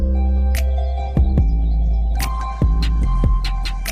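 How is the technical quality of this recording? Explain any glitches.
The quality falls sharply partway through. From 0.99 s to the end, the adaptive stream plays at a lower bitrate. The connection likely slowed and the player switched without a gap, which fits a step from 64 to 16 kbit/s Opus. Codec artefacts rise, and the change in quality is abrupt at that moment.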